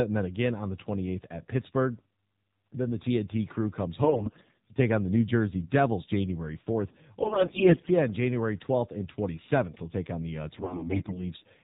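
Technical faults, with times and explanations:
Throughout: AMR narrowband mobile codec. Everything above 4 kHz is missing, and the voice has a buzzy, synthetic edge. This fits a low-rate mode near 7.4 kbps, where each 20 ms frame rebuilds speech from a vocal-tract model driven by sparse pulses.
4.04–4.68 s, 7.22–7.91 s and 10.58–11.19 s: AMR bit errors. Corrupted low-priority bits misplace the excitation pulses and skew the fine pitch, gain and spectral values. The voice keeps roughly its pitch and level but turns hoarse and gargly. This is harshest at 7.22 s, where about a fifth of bits look flipped rather than about a tenth.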